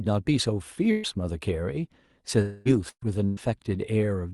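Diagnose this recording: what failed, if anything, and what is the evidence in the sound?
Network packet loss: bursts of packet loss at 0.91–1.06, 2.89–3.04 and 3.25–3.40 s replace about 120 ms of speech each with a fading continuation of the last sound, the second ending in silence.

At 2.41–2.68 s the speech is replaced by about 240 ms of fading buzz or hiss before resuming further on, likely a long network dropout concealed by the receiver.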